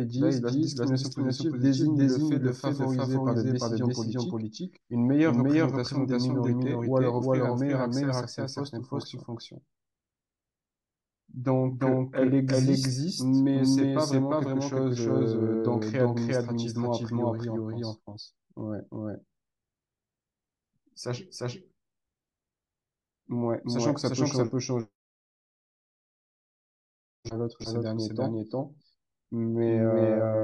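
Throughout the recording, the signal was most likely captured twice, with a second, slower path or an out-of-step edit layering a duplicate onto the original. The result is a doubled audio track: a full-band copy of the speech trails the original by roughly 400 ms at about the same loudness. Every syllable is answered by a clean, dry repeat with no decay or room colouring, so the two streams overlap.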